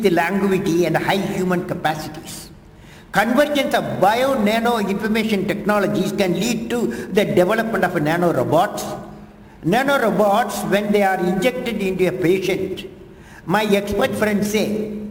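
The converter's sampling clock wanders by roughly ten microseconds throughout, causing sample clock jitter: a hiss about 25 dB below the signal, thickening on loud, bright passages.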